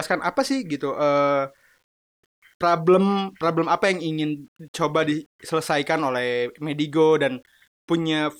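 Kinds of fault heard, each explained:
Low bit depth without dither: A grainy, rough distortion runs through the whole speech clip and follows the speech rather than sitting under it as steady hiss. It grows harsher as the speech fades, and the quietest moments sputter or drop to near silence. The grit sits roughly 45 dB below the speech. This points to resolution of around 9 bits. The likely cause is rounding to that coarse step size with no dither to break up the error.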